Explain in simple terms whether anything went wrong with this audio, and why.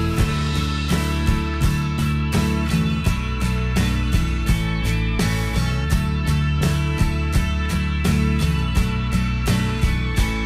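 A regular click comes about every 2 seconds, from 1.54 s to 9.70 s, about five in all. This is likely clock drift buffer slips: two devices' clocks disagree by roughly 70 parts per million, so a few samples get dropped or repeated periodically.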